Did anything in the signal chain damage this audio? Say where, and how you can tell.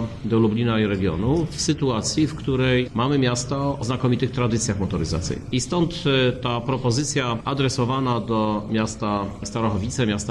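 No, nothing audible points to damage at any stage of the chain.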